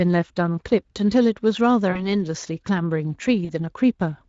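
At 1.91 to 2.10 s and 3.45 to 3.53 s, VoIP packet loss concealed by the speech codec: about 40 ms went missing and the decoder extrapolated, leaving a buzzy or noisy, fading smear that shows as flattened harmonics and a dipping waveform envelope before recovering.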